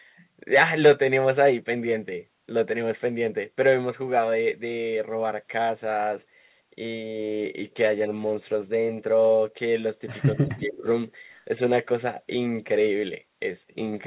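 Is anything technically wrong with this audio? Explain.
Yes. Two faults overlap near the end of this speech clip.

From 10.33 to 10.87 s, there is speech suppressed in double talk. The level dips by about 10 dB for roughly half a second. Both sides were likely talking at once, so the echo canceller turned everything down.

From 10.48 to 10.77 s, there is an echo leak. A faint copy of the voice follows 222 ms behind, about 15 dB below the speech. The loudspeaker side's echo canceller likely missed part of what its microphone picked up.

Both sit over a call path with nothing above 4 kHz, which fits G.711 telephone coding.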